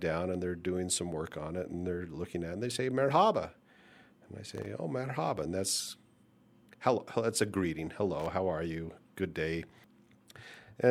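Loose connector crackle at 4.51–4.66 s, before "oh merhaba", and 8.20–8.30 s, between "hello that's a greeting" and "how are you": an intermittent contact chops the signal into brief scratchy bursts.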